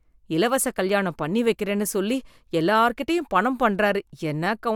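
No technical faults are audible.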